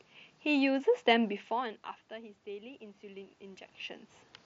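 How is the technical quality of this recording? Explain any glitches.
There's one real glitch here, an automatic gain rise. The rest of what you hear is the room and the Bluetooth headset link.

From 1.22 s to 3.72 s the automatic gain control is rising. Around 1.5 s the talker seems to move away, and the level at the mic falls by about 20 dB. The gain control reads that as too-quiet input and slowly winds its gain up by about 6 dB over those two and a half seconds. Because it lifts everything together, you hear the voice and the room noise swell up at the same time. Around 3.5 s the talker shifts again.

The bandwidth tops out near 8 kHz with a light grain on louder sounds, which fits an mSBC headset codec.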